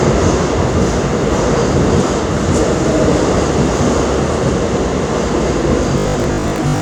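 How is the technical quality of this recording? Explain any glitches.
The recording has one glitch near the end. From 5.98 to 6.8 s, a robotic sound from repeated short buffers appears: about half the audio is likely replaced by repeated 20 ms chunks, forcing a rigid 50 Hz buzz. A spectrogram would show evenly spaced 50 Hz harmonic lines, and the waveform would show identical repeating blocks.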